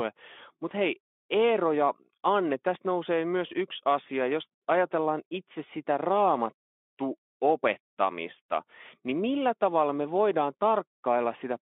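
Speech clip with no audible technical faults.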